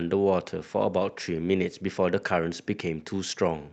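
From 0.56 to 2.27 s the speech turns rough and watery, consistent with a call bitrate drop, roughly 64 to 21 kbps, forcing coarser Opus coding for 1.35 s.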